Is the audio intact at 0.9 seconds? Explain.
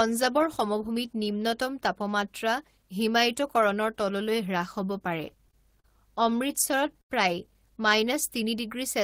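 Yes, the audio is intact at 0.9 seconds, with no fault audible at that moment.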